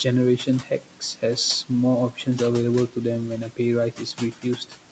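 Noise suppressor artifacts run through the whole speech clip: the steady room noise is pulled down by about 12 dB between phrases and swells back under them, leaving a residue. On a spectrogram the noise floor pumps, with speckled, flickering patches between words.

Speech cut by the noise suppressor occurs from 0.38 to 1.23 s, from 2.12 to 2.27 s and from 3.92 to 4.45 s. The suppressor treated quiet speech as noise and turned it down by about 13, 11 and 12 dB, so roughly a few hundred milliseconds of soft consonants and word endings sound swallowed. The waveform shows brief dips in those stretches, and the spectrogram shows faded high-frequency consonant energy there.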